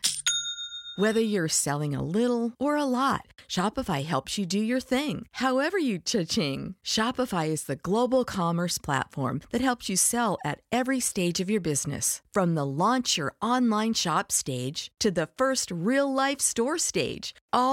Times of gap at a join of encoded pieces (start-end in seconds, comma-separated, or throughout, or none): none